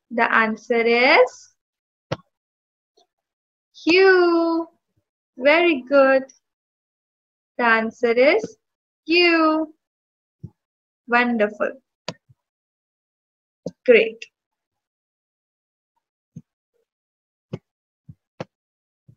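No technical faults can be heard in this audio.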